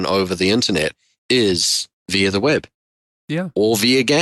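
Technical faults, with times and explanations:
No audible technical faults.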